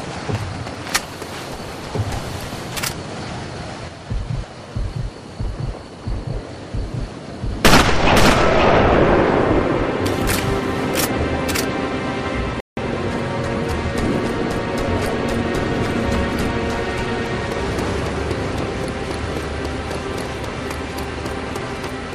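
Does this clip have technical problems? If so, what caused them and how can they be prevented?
Yes. A playback stall occurs at 12.60 s: the sound stops in mid-flow and the output goes silent for about 170 ms, until 12.77 s, before continuing. The likely cause is the player running out of buffered data or its playback thread being blocked, so no samples reached the output for that interval. Prevent this by giving the player a deeper buffer and running its audio thread at high priority, free of blocking work.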